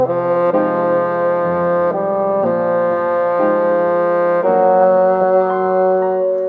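No technical faults are audible.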